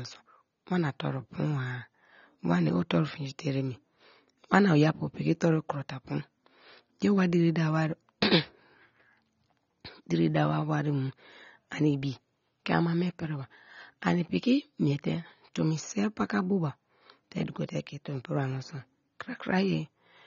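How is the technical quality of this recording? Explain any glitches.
The recording has one problem that runs right through it. Throughout, the speech sounds dull and smeared with a fizzy, warbling edge on sibilants, likely from AAC compression squeezed down to something like 24 kbps.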